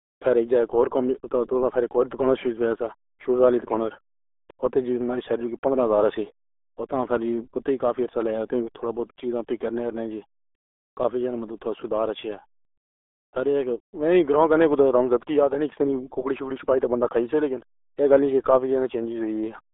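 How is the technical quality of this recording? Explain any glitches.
Poor: the entire recording carries heavy RealAudio 14.4 codec damage. Throughout, a modem-era speech coder, consistent with about 8 kbit/s, confines the speech to roughly 300 Hz to 3.6 kHz and discards fine detail, leaving it muffled and gargly. A spectrogram shows an empty band above 3.8 kHz and smeared, blotchy harmonics below it.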